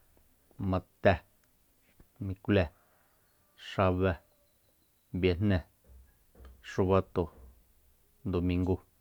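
No dropouts, clipping, distortion or timing errors can be heard anywhere in the speech.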